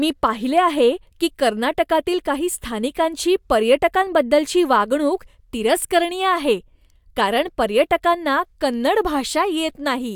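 No technical faults can be heard anywhere in the speech.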